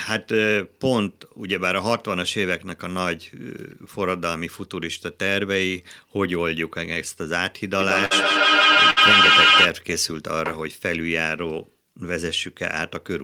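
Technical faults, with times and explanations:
7.80–9.74 s, feedback echo between two devices: a second device in the room replays this microphone's signal, which is picked up again, and neither echo canceller removes the other's output. The sound returns roughly every 150 ms, thinning and ringing, with repeats piling up to about 8 dB above the speech.
8.05–8.13 s and 8.91–8.98 s, burst of packet loss: consecutive audio packets arrived too late or not at all, so the receiver stretched the last sound over 51 ms and then 59 ms, fading it into a held buzz or hiss, before resuming with 60 ms missing each time.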